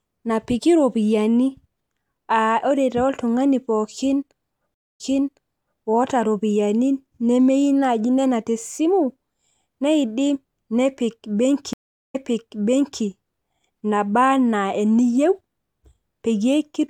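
It's a speech clip with two stream reconnects. At 4.74 s the audio drops out for about 225 ms and comes back roughly 0.84 s earlier than where it left off, so you hear a chunk twice. The same thing happens at 11.73 s, with about 393 ms of silence and a jump back of about 0.89 s. That's the connection breaking and the player restarting its decoder mid-stream, with the server resending a burst it had already delivered.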